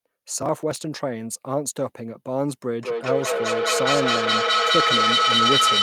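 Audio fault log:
0.42–0.81 s, processor overload crackle: The processor repeatedly failed to finish its audio buffers in time, with around ten deadlines missed across this stretch, a pattern that fits buffers of about 5 ms. Each missed buffer was simply skipped rather than filled, so the speech is punched through with a rapid series of tiny hard-edged gaps. Together these sound like a short burst of gritty crackle riding on the speech, which clears once the load eases.
2.8–5.82 s, feedback howl: Two devices in the same room were joined to one call, and the acoustic loop from loudspeaker back into microphone gained level on every pass instead of losing it. The recirculating sound narrowed onto the frequency the loop favoured, near 1.5 kHz, and swelled into a sustained tonal howl that peaks at about 5 dB above the speech. It pulses roughly every fifth of a second, matching the loop's delay, and continues to the end of the clip.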